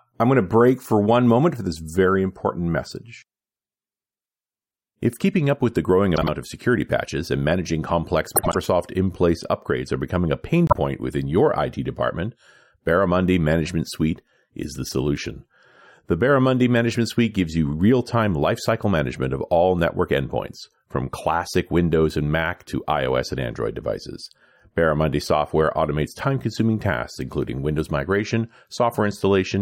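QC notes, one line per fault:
6.16–6.29 s, frames out of order: two neighbouring blocks of about 52 ms swapped places, fitting two-frame runs, so the speech flutters briefly.
8.35–8.56 s, frames out of order: the longest swap, two blocks of about 78 ms exchanged, fitting three-frame runs, giving a garbled stutter.
10.67–10.75 s, frames out of order: two single blocks of about 26 ms reversed, likely one frame each, heard as a quick flick with no time lost.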